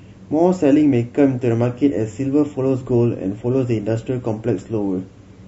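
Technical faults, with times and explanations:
1.62 s to 5.47 s, adaptive stream at a lower bitrate: the speech abruptly loses treble and turns swirly and metallic with no gap, consistent with a drop from about 128 to 32 kbit/s MP3. A spectrogram shows the upper band suddenly cut flat, with smeared, blocky energy below.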